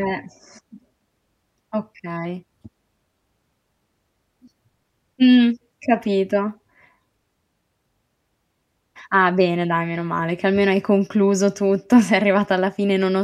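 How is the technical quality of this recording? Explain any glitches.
The recording has no technical glitches anywhere in the signal, so there is nothing to explain.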